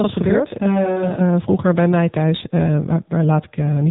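Speech runs through an AMR narrowband mobile codec for the whole clip. Nothing above 3.8 kHz survives. The voice sounds buzzy and synthetic, which fits a low AMR-NB mode near 6.7 kbps. From 0 to 1.21 s, a channel delay (doubling) adds a late copy about 40 ms behind. When the two channels are summed to mono, the sound doubles. The effect stops just before "vroeger bij mij thuis".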